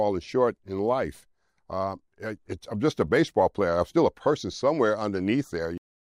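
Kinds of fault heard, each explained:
Cut-off end: at 5.78 s the sound stops mid-event and the remaining 0.36 s of the file is flat digital silence. The final stretch of audio was never written out or played back, so whatever was sounding is chopped off abruptly instead of fading or decaying naturally. There is no tail, reverb or release, just an instant drop from signal to nothing, which marks the end as truncated rather than finished.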